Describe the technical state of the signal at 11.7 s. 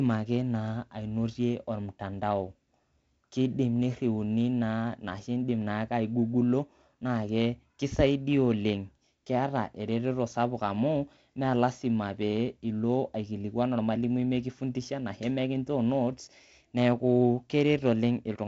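At 11.7 s the speech is intact, with no fault present, only the ordinary character of the G.722 wideband telephone coding it passes through.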